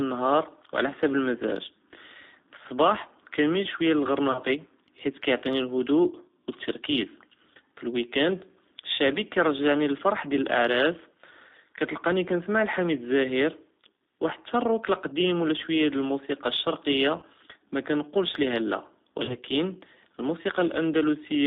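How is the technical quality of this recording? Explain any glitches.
The technical quality is limited: the speech sounds narrow, rough and slightly synthetic throughout, with two brief glitches.

The narrow, rough tone comes from the G.729 codec. Only about 250 Hz to 3.7 kHz survives, and the low-rate 8 kbit/s pulse modelling makes the coding damage plainly audible.

At 4.32–4.40 s, just after "פי צבאה כנמיל שוייא", and again at 19.25–19.35 s, the sound briefly smears into a fading buzz or coloured noise. This is VoIP packet loss concealed by the speech codec. About 30 ms of audio went missing each time, which fits one lost packet. The decoder extrapolated from its last frame, so the distortion lingers slightly beyond the gap.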